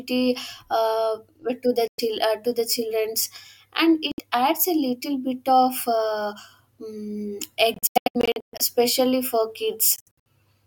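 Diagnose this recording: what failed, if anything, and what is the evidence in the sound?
Bluetooth dropout, likely, at 1.88–2.00 s, 4.12–4.19 s (after "the childrens and"), 7.74–8.61 s and 9.96–10.18 s. The speech cuts abruptly to silence and resumes further on, as though it had played through. The later two are bursts of short gaps, which fits late wireless packets being dropped at playback.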